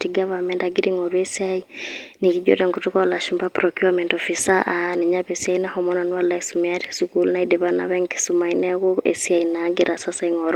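No technical faults can be heard anywhere in the recording; the speech signal stays continuous and intact throughout.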